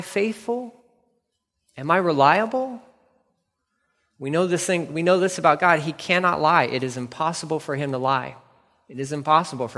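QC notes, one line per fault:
No technical faults are audible anywhere in the speech signal.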